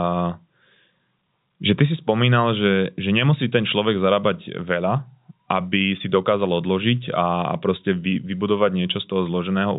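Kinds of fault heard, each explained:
No faults: the speech sits in a G.711 A-law telephone channel at 64 kbps, band-limited to 4 kHz, with no more than a faint level-tracking quantisation hiss.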